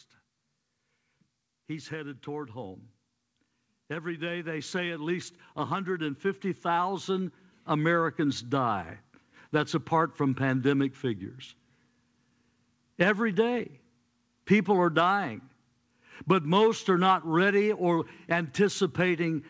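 From 4.02 to 8.86 s the automatic gain is rising: the control decides the speech is too quiet and slowly lifts everything by about 9 dB, so voice and background swell together. Through the call path the sound stops near 8 kHz, which fits a wideband codec like G.722.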